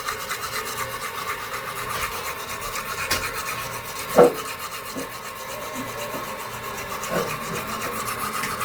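Throughout, the sound is grainy and rough rather than swirling, the mark of Opus compression likely at a low rate near 24 kbps, with bands noise-filled yet content reaching about 20.2 kHz.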